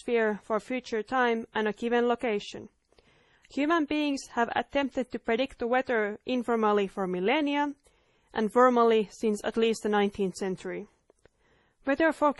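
From the first second to the last, this speech has the layered grit of transcoding between lossy codecs. Nothing makes it past about 11.9 kHz, so the top end is simply gone. There's a smeary, swirly low-bitrate MP3 texture, and on top of it a second, different kind of fizz. The likely story: it was squeezed hard into MP3, then re-encoded to Opus, which spent its bits carefully preserving the old damage.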